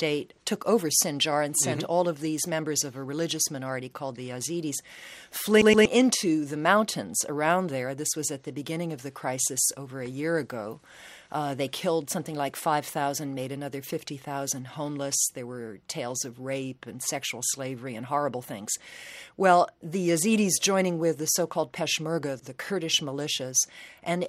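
At 5.62 s the audio catches on itself. This is a CD stuck on one turn. For 0.24 s, until 5.86 s, a slice of about 0.12 s plays twice. There is a brief mute at each jump back. A scratch sends the laser back to the same point on the disc, so the same short fragment repeats. It sounds like a quick, even stutter. Then playback moves on.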